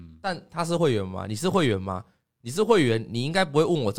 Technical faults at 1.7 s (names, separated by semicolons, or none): none